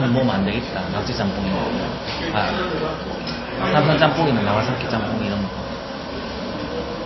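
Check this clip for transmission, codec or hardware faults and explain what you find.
One codec fault runs through the whole clip, most likely MP3 compression. Nothing sounds above 5.8 kHz. The encoder cuts the treble there and drops weak frequency lines that flicker between frames. The result is plainly watery and swirly, with smeared attacks. This fits a very low bitrate, around 24 kbps.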